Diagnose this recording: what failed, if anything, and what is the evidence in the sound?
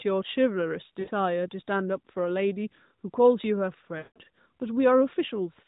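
Lost AMR speech frames, a network-stage fault on the radio link, occur twice: at 1.00 to 1.10 s (about 80 ms, fitting four 20 ms frames) and at 3.98 to 4.20 s (about 180 ms, fitting nine). The decoder discarded the corrupted frames and repeated the last good pitch and vocal tract parameters at falling gain. So the sound stretches into a droning smear that fades rather than cutting off, and it returns weak or rough. A buffer underrun or packet gap would instead leave an abrupt silence or click. The narrowband codec path still limits everything to below 4 kHz.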